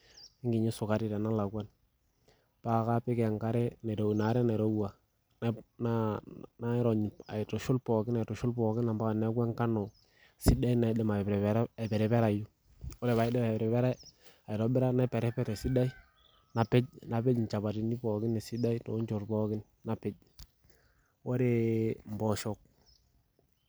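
No technical faults are audible anywhere in the recording.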